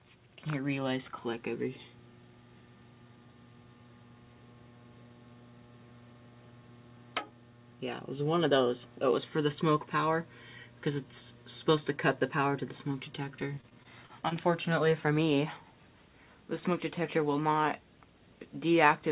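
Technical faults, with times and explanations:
13.3 to 14.33 s, repeated packet loss (robotic sound): eight short dropouts, the longest about 29 ms, arrive in quick succession. Each one is patched by extending the preceding sound, so about 14% of that second is concealment. The sound turns choppy, with small pieces missing.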